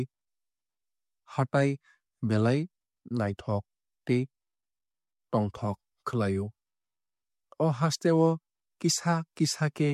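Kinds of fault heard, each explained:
Pre-echo: a short hiss, about 11 dB up, smears roughly 10 ms ahead of speech attacks at 3.38 s and 9.36 s, fitting a 26 ms transform block never switched to short blocks.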